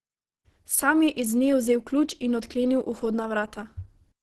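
Throughout the speech, nothing reaches above 12.1 kHz, and the sound is muffled and hoarse, pointing to a rate near 16 kbps. The cause is likely Opus compression in its hybrid speech mode. Unlike MP3, it swirls less.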